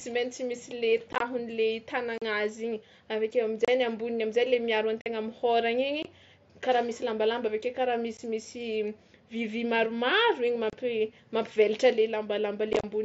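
Unconcealed Bluetooth headset packet loss punches holes in the speech at 1.13, 2.18, 3.65, 5.01, 6.03, 8.17, 10.70 and 12.73 s. Voice packets between headset and phone went missing, and silence or an idle pattern replaced them with nothing to patch the gap. Each loss totals 15 to 60 ms and has hard edges. The lengths fit lost 7.5 ms packets. At 1.13 and 12.73 s, the losses are scattered across about 75 and 105 ms, so those spots sound chopped and rough. Under these gaps, the mSBC headset link carries speech up to 8 kHz with a light grain.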